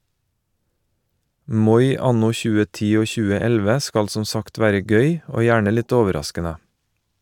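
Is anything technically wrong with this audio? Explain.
No, nothing technically wrong can be heard in this speech recording. No part of it calls for a fix.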